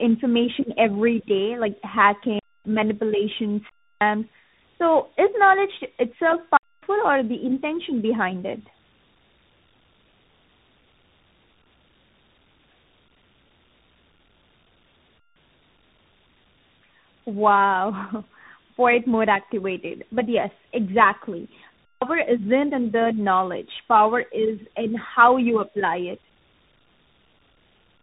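From start to finish the speech carries tandem speech coding. It passed through AMR-NB, then G.711 A-law, then CVSD, each decoding and re-encoding the last one's damage. Nothing reaches above 3.8 kHz. The result sounds muffled, rough and warbly.

Blocks of digital silence then cut in four times. The first runs from 2.39 to 2.65 s, lasting 256 ms. The second runs from 3.69 to 4.01 s, about 317 ms. The third, 6.57 to 6.83 s, is 256 ms and ends just before "or the intention behind". The last falls between "yes exactly" and "isn't in the knowledge", from 21.85 to 22.02 s, about 171 ms. Its length fits an 8192-sample block. Each is a hard hole, cutting out and back with no fade, likely where the output buffer went unfilled.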